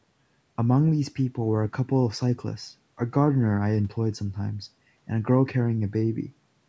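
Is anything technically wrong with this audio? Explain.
No, nothing is technically wrong with this audio.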